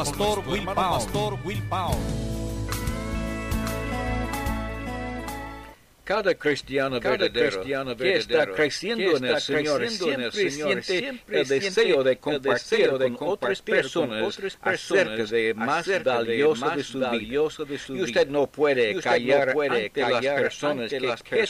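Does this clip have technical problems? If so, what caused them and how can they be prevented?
Yes. A doubled audio track runs throughout: a second full-band copy of the sound trails the original by about a second, around 5 dB quieter, with no decay or room colouring, so everything is heard twice in a flat, detached echo. The likely cause is the same signal being captured again through a slower route, such as a monitoring or network return, and mixed back in. Routing only one source to the recording, or muting the delayed return path, prevents it.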